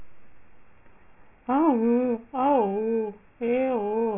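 Throughout the speech, aliasing: resampling from 16 kHz to 6 kHz skipped the anti-alias filter, so content above 3 kHz folds back as unrelated tones roughly 25 dB down. Sibilants turn gritty and metallic. Plain band-limiting would sound merely dull, not harsh.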